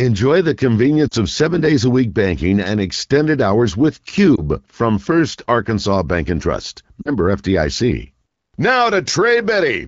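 Short dips with a warble occur at 1.07 to 1.14 s, just before "of seven days a", at 4.36 to 4.41 s, after "and extended hours with", and at 7.02 to 7.10 s. These are lost AMR speech frames. The wideband decoder held the last good pitch and vocal tract settings at falling gain, and each gap fits one or two 20 ms frames.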